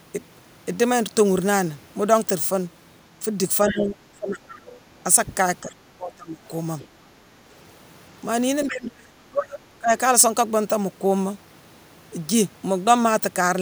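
A speech recording with two recurring faults. The first is speech suppressed in double talk. The talker's level sinks from 3.64 to 4.45 s, from 5.61 to 6.41 s, and from 8.68 to 9.92 s. The first dip is about 20 dB deep. The later two reach about 30 dB. Each dip thins or breaks up the voice for most of that span. The likely cause is an echo canceller that cannot tell its own talker from the loudspeaker echo while both sides speak, so it turns everything down. The second fault is the other side's voice leaking through. A short scrap of another voice sits at 3.69 to 3.75 s, only about 10 dB under the talker. Fainter bits, about 25 dB down, appear at 4.52 to 4.72 s and 6.79 to 6.87 s. They are brief. This is likely loudspeaker sound that the echo canceller did not fully remove from the microphone.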